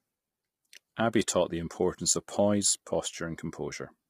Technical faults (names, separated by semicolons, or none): low-delay AAC compression